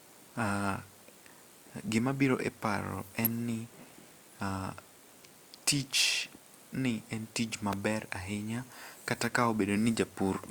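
An electrical switching spike lands at 3.25 s and again at 7.73 s in this speech clip: each is a sharp snap of 5 to 14 milliseconds sitting on top of the speech, the first peaking somewhat louder. Its likely cause is a nearby switch, motor or static discharge arcing briefly and coupling into the audio line.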